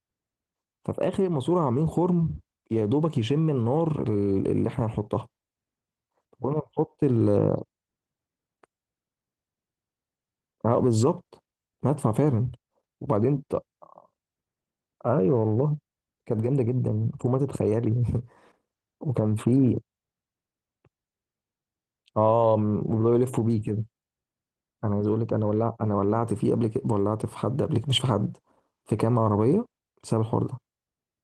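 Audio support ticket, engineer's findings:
No fault found in the speech recording. Opus voice compression is working as a normal path, with light codec colouring and full bandwidth consistent with hybrid mode at around 20 kbps.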